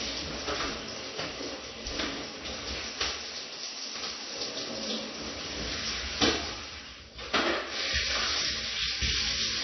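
Everyday sounds here, and the whole clip carries AAC compression damage you can plainly hear. Nothing comes through above 6 kHz, so everything sounds dull and boxed in, and the sustained parts have that smeared, warbly, fizzy texture you get when too few bits are spread across the spectrum. It's most likely AAC-LC squeezed hard, and the amount of damage fits a bitrate down around 24 kbps.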